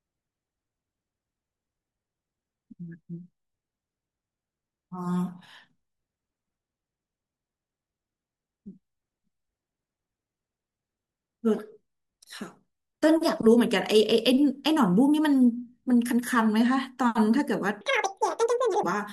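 From 17.81 to 18.83 s the speech suddenly runs at twice the speed and a full octave higher. That is audio read two samples at a time: pairs of samples are taken as one frame, doubling the speed and folding high frequencies back down.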